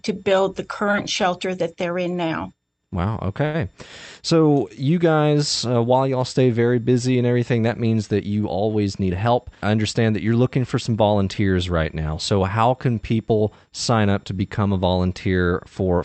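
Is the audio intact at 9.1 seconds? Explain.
No. A jitter buffer speed-up runs from 9.03 to 9.74 s, which covers 9.1 s. The receiver's jitter buffer had built up more audio than its target, so it shortened playback by repeatedly cutting out short pieces one or a few pitch periods long, removing about a tenth of a second in total. The speech plays at 112% speed with its pitch unchanged, fast enough to sound hurried.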